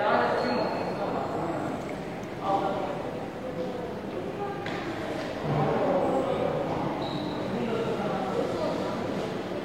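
At 5.98 s, about 43 ms of the everyday sound turns briefly smeared and noisy: AAC frame loss with concealment. The length fits a single missing AAC frame, which the decoder covered by reusing the last good spectrum with randomised phase. That gives a phasey, noisy stand-in rather than a hard gap. Unlike a plain dropout, there is no silence at 6.03 s when the real audio returns.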